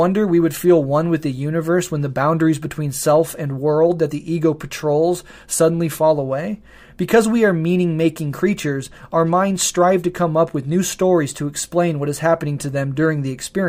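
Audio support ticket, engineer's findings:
Listened through the whole speech recording and nothing wrong turned up, so no faults to log on this ticket.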